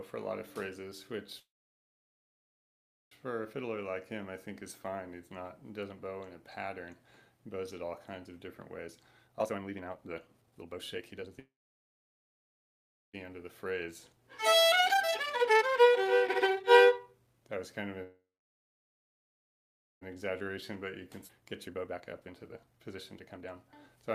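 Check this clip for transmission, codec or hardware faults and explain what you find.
Three kinds of transmission fault are present: repeated call audio freezes, two jitter buffer speed-ups, and one skip ahead.

Call audio freeze, 1.39–3.13 s, 11.39–13.15 s and 18.03–20.03 s: packets were likely held up in transit and the jitter buffer ran dry. A brief concealment tail gives way to about 1.7 s of silence (about 1.8 s in the last), and the sound then resumes where it stopped, with nothing lost.

Jitter buffer speed-up, 8.87–17.82 s and 20.15–24.04 s: the receiver had too much audio buffered and removed tiny pitch-period slices over and over to shed roughly 4 s and then 1.5 s. Playback runs at 139% and then 132% with pitch unchanged, so it sounds hurried.

Skip ahead, 21.27–21.31 s: roughly 0.7 s of audio was discarded while later packets were already waiting, likely from buffer overflow. 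The two sides are spliced almost directly, producing an abrupt forward jump.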